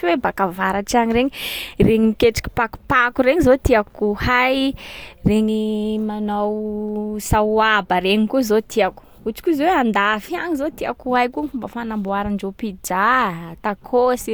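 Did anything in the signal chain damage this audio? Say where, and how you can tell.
No, nothing in the signal chain damaged this audio.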